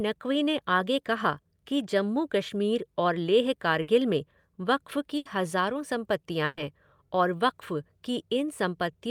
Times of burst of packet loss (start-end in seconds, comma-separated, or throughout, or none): 3.81-3.89, 5.17-5.27, 6.45-6.59